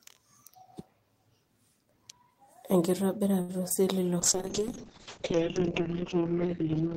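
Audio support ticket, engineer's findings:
Short stall from a late packet, 3.41–3.51 s: sound held about 73 ms with slight buzz, then resumes where it left off. Jitter buffer ran dry; nothing lost, playout delay up 73 ms.

Short concealed packet loss, 3.69–3.72 s and 3.74–3.78 s: two brief smears or wobbles. About 20 ms missing each time, each gap filled by the decoder extending the preceding sound, then blended back.

Call bitrate drop, 4.20 s to end: sound turns rough and muffled, top end gone above 8 kHz, previously up to 20 kHz. Encoder throttled after bandwidth estimate fell; points to roughly 32 down to 7 kbps Opus.

Drift correction step, 5.34–6.45 s: playback about 6% slower and roughly a semitone flat, then snaps back. Likely clock-matching resampler stepping its rate to rebalance the buffer.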